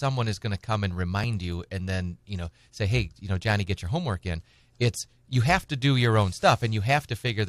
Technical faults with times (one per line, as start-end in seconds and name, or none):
none